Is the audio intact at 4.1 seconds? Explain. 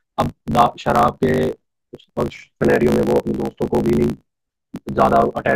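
No. A block size mismatch (truncated) runs through the whole clip, so at 4.1 s the tail of each block is discarded, which fits 1024-sample blocks. The speech buzzes at 54.4 Hz and runs 1.16 times fast at near-normal pitch.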